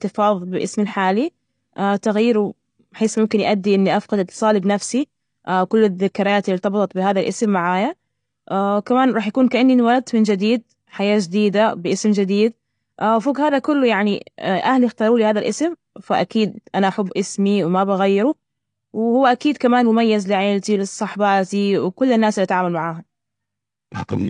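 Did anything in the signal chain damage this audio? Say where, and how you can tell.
Yes, at the codec stage: the speech throughout has a dull, smeared quality with a fizzy edge on sibilants, and nothing sits above 9.8 kHz. The likely cause is AAC compression, starving the encoder's quantiser and lowering its cut-off, which fits about 32 kbps.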